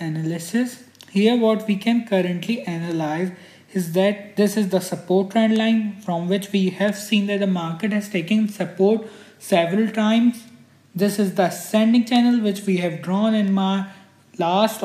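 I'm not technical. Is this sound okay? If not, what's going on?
No. For the first 3.06 seconds there is sample clock jitter. The recording's timing clock wobbles by a few microseconds. So each moment is captured slightly off. This adds a faint hiss or roughness. It grows on loud, bright parts and disappears in quiet.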